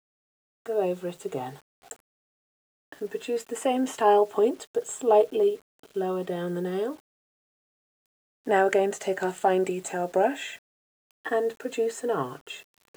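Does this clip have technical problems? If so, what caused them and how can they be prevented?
Yes, a grainy distortion runs through the whole clip, roughening quiet passages and following the sound's level. The likely cause is low bit depth without dither, consistent with rounding to about 8 bits, leaving error roughly 35 dB below the signal. Prevent it by keeping higher bit depth and dithering before reducing it.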